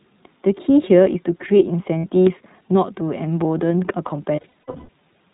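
The whole recording passed through the iLBC codec, a narrowband VoIP coder that encodes each short frame's excitation independently of the previous one. It discards everything above 4 kHz, so the speech sounds boxy and telephone-like, and the damage is plainly audible as a slightly rough, synthetic grain. The character fits iLBC's 15.2 kbps mode with 20 ms frames.

From 1.98 to 2.06 s, a 60 ms stretch of lost iLBC frames forced the decoder to conceal the gap by looping the last pitch period with added noise. What you hear is a brief held, buzzy vowel where the speech should continue, and normal speech returns immediately afterward because each frame decodes on its own.

A heavier burst of loss runs from 4.36 to 4.90 s, with 360 ms missing across about 520 ms. The concealment repeats in patches, the longest roughly a tenth of a second, so the speech there breaks into a stuttering series of drawn-out, breathy, fading tones.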